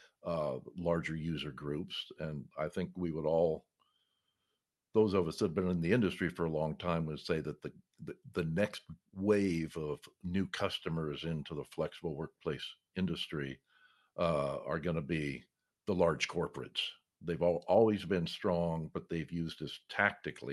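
Speech recording; no technical faults can be heard.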